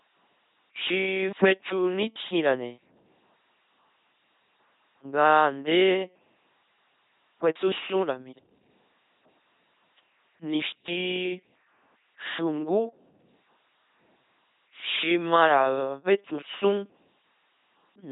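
Throughout the speech the sound is buzzing and robotic, with nothing above 3.8 kHz, the heavy damage of an LPC-10 vocoder that drives an all-pole filter from a pulse train or noise at a 2.4 kbit/s rate.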